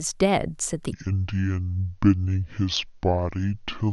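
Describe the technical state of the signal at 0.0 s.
At 0.0 s the speech signal is intact, with no audible technical fault at that moment.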